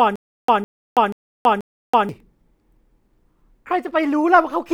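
Speech, opening mid-stutter with silent gaps: a 156 ms burst repeats four times, each followed by 327 ms of dead silence, until 2.09 s, likely a stalled stream.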